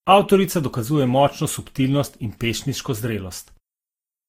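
Throughout the speech, two layers of codec artefacts sit on top of each other. Nothing is heard above 16.6 kHz. The sound points to likely transcoding between lossy codecs, with low-bitrate Opus encoded again as Vorbis. Vorbis spends bits re-coding the Opus artefacts and adds its own.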